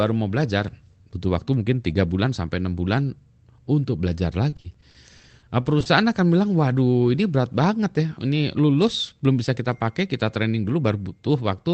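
Just after "enam bulan untuk belajar", from 4.49 to 5.88 s, the speech turns choppy and robotic. This is repeated packet loss: around fourteen short gaps of up to 40 ms, each patched by stretching the last sound. From 10.59 to 10.93 s the speech briefly hurries at unchanged pitch, about 10% faster. A jitter buffer speed-up trimmed roughly 40 ms of pitch periods to cut the delay.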